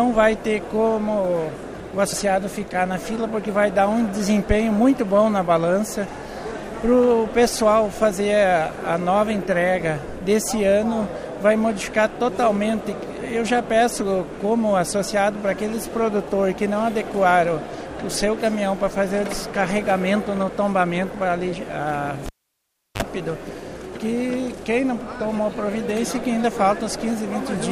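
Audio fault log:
22.26 to 23.02 s, cable pulled and plugged in: a pop as the live lead comes out, then about 0.71 s of near silence, then a short 47 ms burst of 50 Hz mains buzz while only the tip makes contact, and a second pop as the plug seats and the sound comes back.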